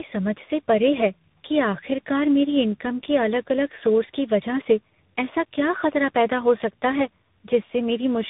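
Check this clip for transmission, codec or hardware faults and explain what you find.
There's one fault, and it runs through the whole clip: tandem speech coding. The speech passed through three speech coders in a row, sounding like CVSD into a low-rate AMR-style stage and back into CVSD, each reworking the last one's damage. You hear rough, muffled, warbly speech with nothing above 3.8 kHz.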